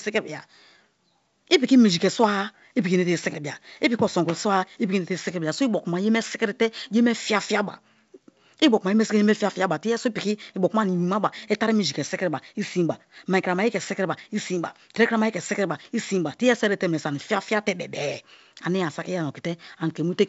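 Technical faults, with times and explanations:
Nothing here counts as a fault: the speech comes through G.722 wideband telephone coding with only light codec damage and nothing above about 7.7 kHz, which is just what that path sounds like when it's working as it should.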